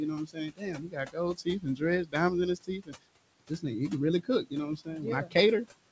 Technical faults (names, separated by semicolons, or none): noise suppressor artifacts; speech cut by the noise suppressor